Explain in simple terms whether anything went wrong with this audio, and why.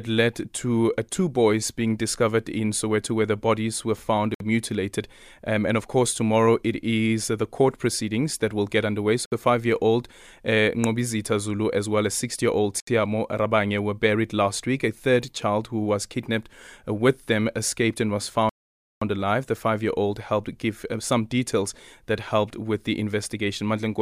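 The speech drops out to complete silence four times and then carries on: at 4.34 s for about 60 ms, right after "where the bodies were"; at 9.26 s for about 60 ms, between "that will get underway" and "five year old uh"; at 12.80 s for about 70 ms, after "year old"; and at 18.49 s for about half a second. This is likely a Bluetooth stall. Wireless interference delayed the audio data, the headphones ran out of buffered sound, and playback paused until the missing data arrived.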